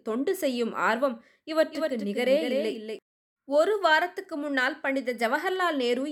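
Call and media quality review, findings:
Doubled audio track, 1.71–2.99 s: full-band second copy about 5 dB down, trailing by roughly 200 ms, starting and stopping abruptly. Likely a slower duplicate capture path or misaligned edit. Unlike echo or reverb: one repeat, no decay, no room colour.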